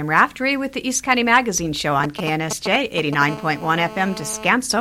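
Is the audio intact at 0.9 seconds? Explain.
Yes, the audio at 0.9 seconds is intact, with no dropout, click, distortion or other fault audible at that point.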